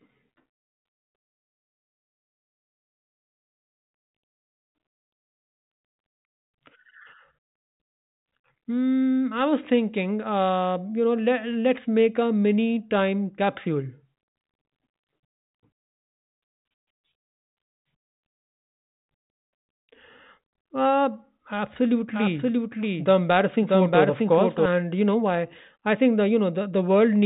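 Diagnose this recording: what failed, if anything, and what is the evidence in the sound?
A doubled audio track runs from 22.14 to 24.66 s. A full-band copy follows about 0.7 s behind, at roughly equal level. It has no decay or room colour. It cuts in and out abruptly. The likely cause is a second, slower capture path.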